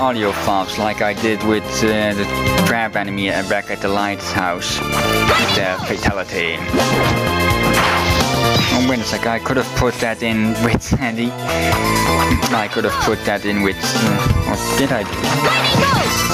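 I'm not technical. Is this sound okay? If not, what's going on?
No. Gain pumping throughout: loud and soft parts end up closer in level and the sound is squashed, likely from gain set too high and a limiter clamping down.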